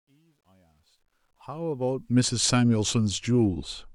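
Truncation distortion on a fade runs from 0.0 to 2.4 s in this speech clip. The fade-in's quiet start is quantised coarsely without dither, fitting an 11-bit stage, so it sounds gritty until about 1.17 s before the level settles.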